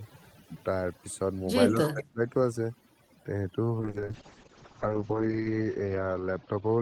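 Across the whole clip, overdone noise removal is audible: the suppressor pulls individual frequency bands down whenever they sit close to its noise estimate, taking soft parts of the speech with them. The background collapses to near silence with twinkling specks.

From 1.76 to 1.87 s a faint delayed copy of the speech appears, trailing by about 195 ms at roughly 15 dB below the direct voice. This is likely an echo leak, where a loudspeaker-side canceller let part of the far-end sound back into the return path.

Between 1.92 and 2.21 s, for around 300 ms, the speech dips sharply, by roughly 25 dB at its deepest. The likely cause is speech suppressed in double talk: with both sides active, the canceller treated the talker as echo and attenuated it.

From 3.81 s to the end, a call bitrate drop takes the encoding from 32 kbps to 7 kbps, holding at the lowest rate for 1.67 s. Audio bandwidth narrows from 20 kHz to 8 kHz, so the speech turns muffled and rough, with coarse, watery coding texture.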